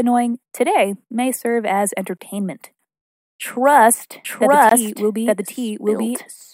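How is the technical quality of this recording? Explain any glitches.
The recording has two kinds of glitch: brief dropouts in the speech, and a second copy of the audio that runs through the final seconds.

Gap between chunks: at 2.17 to 2.19 s and again at 4.69 to 4.71 s, the speech breaks into a 20 ms hole of silence with hard edges on both sides. Nothing is missing, but the flow is cut at each join. The two holes fall 2.5 s apart, which fits audio delivered in 2.5 s chunks, with a little silence inserted at each boundary by padding or a late chunk start.

Doubled audio track: from 4.25 s to the end, the speech is heard twice. An identical full-band copy trails the original by about a second at roughly the same loudness, so the voice seems to overlap itself. The copy has no reverberant tail or room colour, and it enters abruptly. That clean, fixed offset likely comes from the same signal being captured a second time through a slower path, or from an edit that left two out-of-step copies.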